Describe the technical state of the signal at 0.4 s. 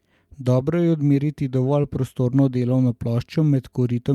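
At 0.4 s the speech signal is intact, with no audible technical fault at that moment.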